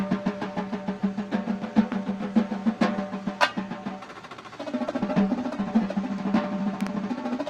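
At 1.92 to 1.94 s there's a loud pop, a single sharp click sitting roughly 10 dB above the surrounding sound, which carries on underneath it. That's the signature of a sudden voltage step hitting the signal path, likely from a plug, switch, static discharge or driver glitch, with the downstream circuitry shaping it into that brief thump.

From 4.8 to 5.97 s you get a call bitrate drop. The audio goes rougher and duller, with the top end thinning out, and it stays at its worst for about 1.1 s before clearing. What you're hearing points to the encoder being pushed from around 32 kbps down to roughly 15 kbps after the bandwidth estimate fell. At that rate Opus quantises much more coarsely and trims the high frequencies.

Then at 6.81 to 6.89 s there's another loud pop, this time two in quick succession and hotter, about 15 dB over the signal. The sound keeps going beneath them, and again the likely culprit is an electrical transient.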